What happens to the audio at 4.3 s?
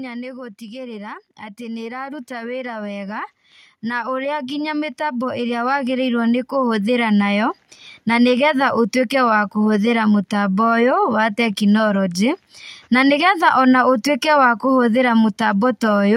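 At 4.3 s the speech sits in the middle of an automatic gain rising event that runs from 0.58 s to 7.26 s. The gain control judged the input too quiet and kept turning it up, by about 16 dB overall, so the voice and the background noise swell together rather than the speech alone getting louder. On a waveform the envelope widens steadily across that span; on a spectrogram the noise floor brightens along with the speech.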